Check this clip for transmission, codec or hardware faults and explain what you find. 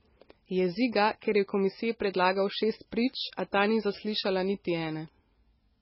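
One codec fault runs through the whole speech clip: the damage points to heavy MP3 compression, likely at a very low bitrate in the region of 16 kbps. Starved of bits, the encoder discards everything above 5.6 kHz and drops quieter frequency lines, which flicker in and out between frames. The result is dull, band-limited speech with a watery, swirling texture, metallic chirping on sibilants, and blurred consonant onsets.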